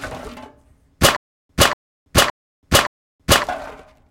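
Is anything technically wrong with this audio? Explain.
Yes. From 1.16 to 3.44 s there is a stutter with silent gaps. A 238 ms burst of sound repeats four times, every 568 ms, with 329 ms of dead silence between. A stalled player or stream likely replayed its last fragment at each retry, losing the intended audio.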